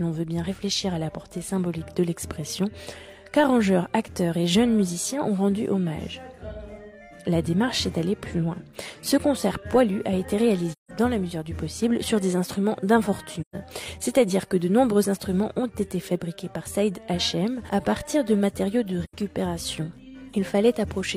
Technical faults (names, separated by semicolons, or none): AAC frame loss with muting